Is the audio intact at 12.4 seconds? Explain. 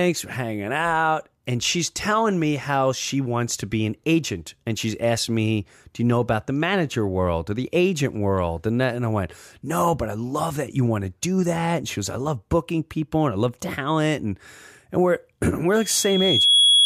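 Yes, the speech at 12.4 seconds is intact, with no fault audible at that moment.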